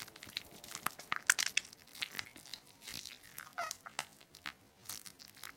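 From 1.74 s to the end, a time-stretched section slows the sound to roughly 0.54 times its pace while pitch holds steady, leaving it dragging. Software likely lengthened it by repeating short pieces. Unlike a plain slowdown, nothing drops in pitch.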